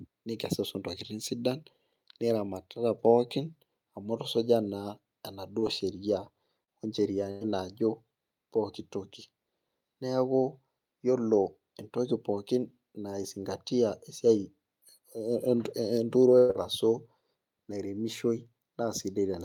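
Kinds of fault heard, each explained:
Short concealed packet loss: brief smears or wobbles near 5.59, 6.64, 7.51 and 16.51 s, where 20 to 40 ms never arrived and the receiver stretched the preceding sound across the hole.
Burst of packet loss: a held buzz or fading hiss at 7.31 and 16.38 s, where about 100 ms went missing, was filled by fading concealment, and the speech then jumped ahead.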